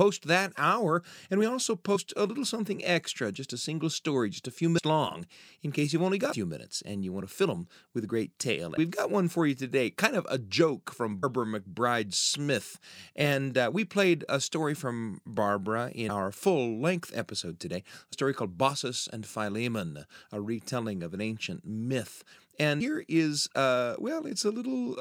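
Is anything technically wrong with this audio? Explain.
Yes: compressed frames skipped at 1.95, 4.77, 6.31, 8.77, 11.22, 16.08, 18.12 and 22.79 s. Whole frames of about 26.1 ms were dropped, so the speech jumps ahead by roughly 50 to 300 ms, each join a brief smeared blip.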